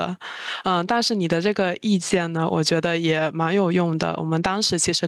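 Gain pumping runs through the whole speech clip: the level swings around 15 dB under each loud syllable, likely from gain set too high feeding a fast limiter.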